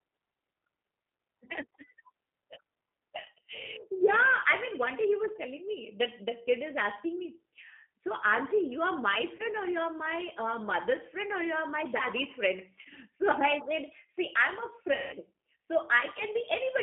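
Across the whole clip the speech carries G.729 codec damage that is plainly audible. The decoder rebuilds the speech from a vocal tract filter, a pitch predictor and a few pulses per subframe, so it sounds slightly rough and synthetic, with a bitrate that fits 8 kbit/s. On a spectrogram the energy stops sharply at 3.4 kHz and thins below 250 Hz. Fine harmonic detail looks blurred and grainy.

VoIP packet loss concealed by the speech codec happens at 9.36 to 9.42 s, at 12.82 to 12.88 s, and at 14.94 to 15.16 s. The first two each hide about 30 ms of missing audio, which fits a single lost packet. The third covers 180 ms, which fits about six. With no packets arriving, the decoder repeats its last pitch and filter at falling gain. Each short gap becomes a brief stretched smear. The long one stretches into a buzzy tone or coloured noise that fades, and the speech stays weak just after it. 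A spectrogram shows flat, frozen harmonic bands, and the waveform shows a repeating cycle that shrinks steadily.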